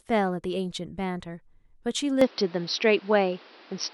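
At 2.21 s the speech abruptly narrows, with nothing above 5.8 kHz, a level shift of around 5 dB and a new background noise roughly 30 dB down, continuing to the end with no gap. This is likely an input switched to a poorer device mid-recording.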